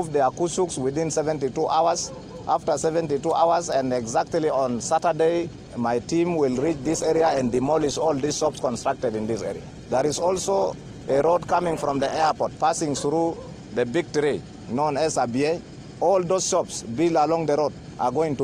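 At 6.53 s the quality falls off a cliff with no gap or dropout, and it stays that way until 12.53 s, about six seconds in all. That's an adaptive stream at a lower bitrate: the player switched to a cheaper version of the stream, likely because the connection slowed, then climbed back up. You hear codec artefacts rise, which fits a drop from around 64 to 16 kbit/s Opus.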